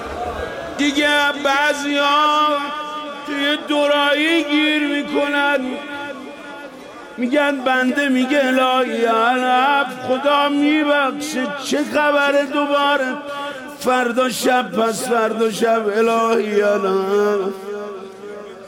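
No technical faults can be heard anywhere in the recording; the signal stays steady and intact throughout.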